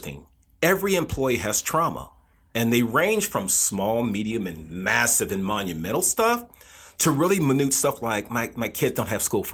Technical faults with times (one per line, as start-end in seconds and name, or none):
none